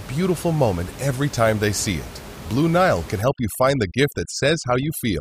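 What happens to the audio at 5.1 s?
Overdone noise removal is active at 5.1 s, running from 3.21 s to the end. The noise reducer, pushed too hard, is cutting frequency bands that sit near its noise estimate, taking the room noise (about 16 dB below the speech) and quiet speech detail with them. The background drops and breaks up into twinkling specks.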